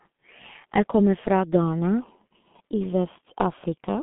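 Across the whole speech clip, the G.723.1 codec leaves its mark: the sound is muffled and hoarse, and consonants smear together, with heavy damage at 6.3 kbit/s. The codec models the voice in coarse 30 ms chunks, so fine detail is lost. A spectrogram shows energy confined to a telephone band of roughly 150 Hz to 3.5 kHz, with nothing above 3.8 kHz.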